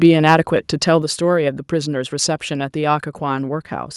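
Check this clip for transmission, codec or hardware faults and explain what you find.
One fault is present. At 1.02 s the microphone volume steps down: speech and background drop together by about 5 dB in one step, likely the call software lowering the input gain after judging it too hot. Unlike a dropout or a fade, the level lands instantly and stays lower.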